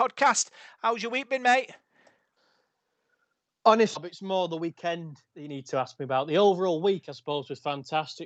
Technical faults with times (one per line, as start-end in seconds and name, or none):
3.95 skip ahead
4.52-4.96 jitter buffer speed-up